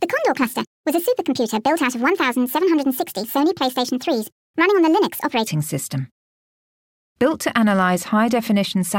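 From the start to 5.47 s the speech sounds hurried and high, running 1.5 times too fast and seven semitones sharp. This is a wrong sample rate: the 1.5 ratio fits 32 kHz audio played back at 48 kHz without conversion.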